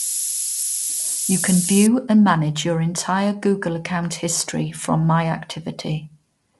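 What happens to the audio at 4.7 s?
At 4.7 s the speech is passing through low-delay AAC compression, which runs for the whole clip rather than starting there. The likely cause is an AAC-ELD encoder working with short frames that resolve pitch harmonics poorly, at a rate that fits roughly 32 kbps. The result is plainly audible: the voice sounds rough and grainy, with noise filling the gaps between harmonics, and nothing remains above 11.6 kHz.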